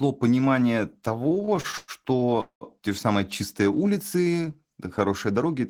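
From 1.19 to 2.64 s, just before "те же самые чистые", the speech shows repeated stalls (stutter): the jitter buffer ran dry fifteen times, and the receiver stretched the last sound to bridge each wait. Nothing is lost. About 493 ms is filled in, and the longest stretch is 200 ms, faded down. Unlike dropouts, the speech drags rather than skipping.

From 4.86 to 5.60 s, after "же самые чистые улицы", a jitter buffer speed-up trims short pitch-period pieces, about 70 ms in total, to shed surplus delay. The speech runs 108% fast but keeps its pitch. That unchanged pitch separates it from a sped-up playback clock.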